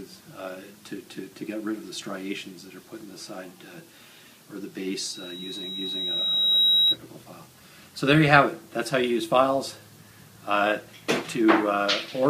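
A loudspeaker feedback squeal runs from 4.99 to 6.99 s: a single 3.8 kHz tone swells over about a second and a half to several decibels above the sound itself. That steady growth separates acoustic feedback from a fixed interference whistle.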